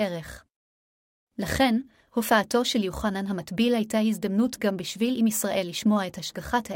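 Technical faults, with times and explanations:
No technical faults are present.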